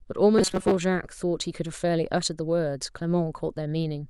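A speech clip turns into a rigid metallic buzz near 188 Hz from 0.38 to 0.78 s, robotic sound likely from a roughly 5.3 ms buffer repeated, about half the time.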